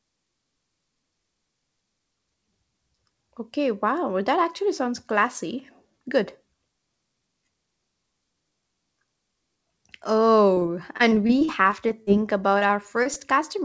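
From 10.54 to 12.10 s, the speech suffers repeated packet loss and turns robotic. Short holes keep opening, the longest about 44 ms. Each hole is patched by stretching the sound just before it, so about 15% of that stretch is filler. The voice sounds choppy, with small pieces missing. A second burst runs from 12.59 to 13.17 s. Its gaps are shorter, up to 22 ms, and the same stuttering, buzzy quality returns.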